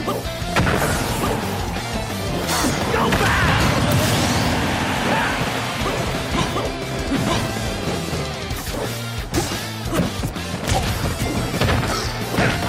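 No technical faults can be heard anywhere in the audio. Nothing along the way interrupts or alters the sound.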